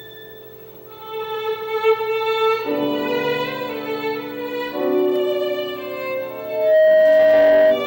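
At 6.29 s a loudspeaker feedback squeal begins and runs to the end at 7.86 s. A single tone near 629 Hz swells over about half a second. It settles about 10 dB above the sound. The microphone is hearing its own loudspeaker, and the loop gain at that pitch exceeds one.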